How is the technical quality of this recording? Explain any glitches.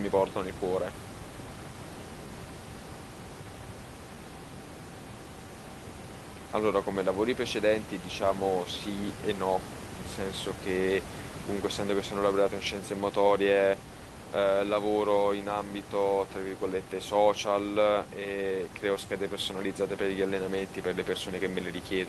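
Timing problems run through the whole recording, over room noise about 12 dB below the speech.

Clock drift between sender and receiver: the sender's clock runs about one and a half percent slow, so the receiver's jitter buffer keeps draining. It has to stretch the incoming audio to avoid running dry, which leaves the pacing of the speech faintly unsteady from start to finish.

Repeated timing corrections: from 0.33 s to 21.53 s the receiver keeps repeating short pieces, all in the same direction, effectively playing at 98% speed and adding roughly a third of a second in total. Each repeat is small, heard as slight, irregularly spaced hiccups or drag in the tempo.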